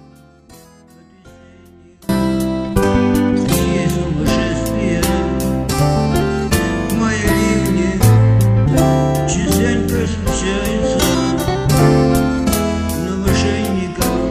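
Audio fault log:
0.00–2.09 s, audio dropout to a faint residue: opens mid-dropout, holding only faint sound about 25 dB down, then full sound snaps back abruptly, unlike a fade-in, likely because the signal was lost while the path after the break stayed live.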